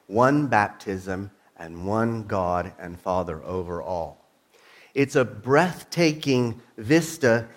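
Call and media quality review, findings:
No capture, transport or playback defects found in the signal path; level, continuity and timing hold steady across the recording.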